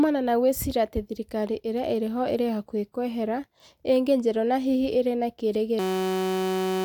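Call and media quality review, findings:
System hang loop, 5.79 to 6.85 s: speech abruptly turns into a steady buzz at about 188 Hz to the very end. Driver or host froze while the audio hardware kept replaying one 5.33 ms chunk, which fits a 256-sample buffer. Roughly a second of audio gone.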